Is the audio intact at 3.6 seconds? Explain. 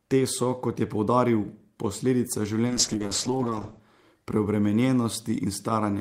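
No, a call bitrate drop from 2.68 to 3.87 s, after "kot je poudaril posledica", cuts the codec from 32 to 9 kbps and narrows the bandwidth to 8 kHz, leaving coarse, muffled speech.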